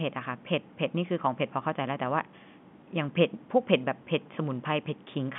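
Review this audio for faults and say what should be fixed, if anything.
Nothing here needs fixing, since the speech just sounds like an ordinary telephone line carrying it, with the band topping out around 3.5 kHz, and there's no fault to chase down anywhere in it.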